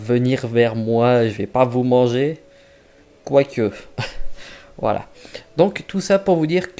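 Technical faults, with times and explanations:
Nothing here needs flagging: no technical faults turn up anywhere in this audio.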